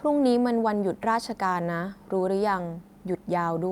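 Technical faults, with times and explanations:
No technical fault can be heard anywhere in the speech, and the signal stays steady and intact throughout.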